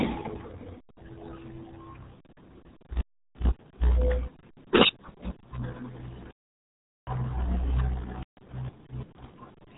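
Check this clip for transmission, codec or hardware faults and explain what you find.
Two kinds of fault are present: a heavily damaging low-bitrate codec across the whole speech clip, and two digital wireless dropouts.

RealAudio 14.4 codec, throughout. This early dial-up speech coder discards most of the signal to fit a tiny data budget. The damage here is heavy, consistent with an 8 kbit/s stream. Nothing above 3.8 kHz survives, so the speech sounds muffled and boxy, with a gargling, watery texture as the coarse model struggles to track the voice.

Digital wireless dropout, at 3.01 to 3.34 s and 6.31 to 7.07 s. In each case the receiver lost too much data, gave up on the link and muted its output with a very brief fade rather than playing corrupted audio. The first gap lasts about 0.33 s and the second about 0.76 s. Both are clean holes of near silence with no crackle or noise burst on either side.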